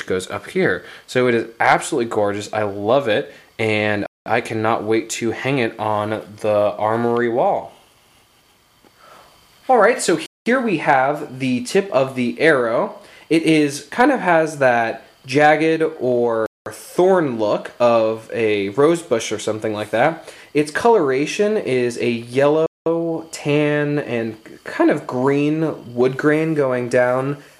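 At 4.06–4.26 s, 10.26–10.46 s, 16.46–16.66 s and 22.66–22.86 s the sound stops for 200 ms, a gap between chunks. The audio was handled in 6-second pieces, and silence was inserted at each join, likely from codec padding or from a player starting each piece late. Unlike a dropout, nothing is missing: the sound picks up exactly where it paused. The holes recur every 6.2 seconds, one 6-second chunk plus the gap.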